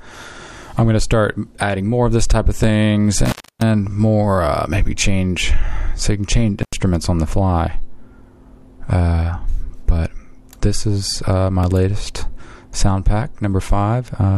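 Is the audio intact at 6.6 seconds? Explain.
No. From 6.63 to 6.73 s the sound drops out abruptly for about 79 ms, with a crackle at the moment it cuts and again as it returns, and a faint hiss fills the gap. This is an intermittent contact: a loose plug or cable briefly lost its connection, so the signal path opened for that fraction of a second, and the rough, scraping make-and-break of the contact produced the crackles at either edge.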